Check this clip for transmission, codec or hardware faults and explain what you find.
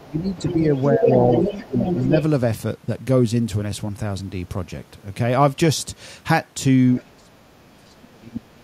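Two echo-control faults are present, both in speech.

Other side's voice leaking through, 0.00–2.23 s at about 5 dB below the talker, and faintly at 6.97–7.03 s: the far end's loudspeaker sound, likely incompletely removed by the echo canceller.

Speech suppressed in double talk at 0.06–0.63, 0.95–1.11, 1.39–1.50 and 1.66–1.93 s, then 7.04 s to the end: the talker dips, from slightly to very deeply by the close, as the canceller likely attenuates both voices together.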